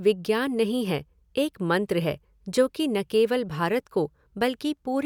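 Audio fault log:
No fault is logged for this speech clip.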